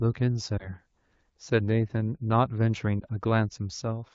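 Speech over what sounds like AMR wideband at a mid rate, around 12.65 kbit/s, has two spots of lost AMR speech frames. At 0.57 to 0.74 s and again at 2.99 to 3.04 s there's a brief dip or warble, each pointing to a single 20 ms frame failing its checksum after radio errors. The decoder papers over the gap by reusing the last good pitch and vocal tract settings at lower gain, and the speech comes back weak or rough for a moment.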